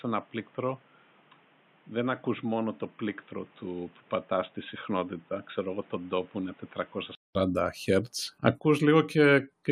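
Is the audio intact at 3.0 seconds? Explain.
No. From 0.0 s to 7.35 s, including the 3.0 s point, the sound points to the input having switched to a poorer device, likely a headset call profile or a lesser microphone. That path passes a narrower band, so the speech at 3.0 s sounds dull and boxy, roughly 10 dB quieter, with a new noise floor about 30 dB down. A 200 ms silence marks the return to the fuller sound at 7.35 s.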